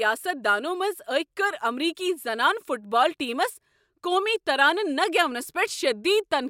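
No technical faults can be heard anywhere in the speech. Nothing in it breaks, drops out or shifts at any point.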